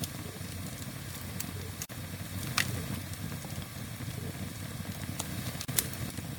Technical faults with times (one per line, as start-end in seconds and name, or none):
1.85-1.89 gap at a join of encoded pieces
5.65-5.68 gap at a join of encoded pieces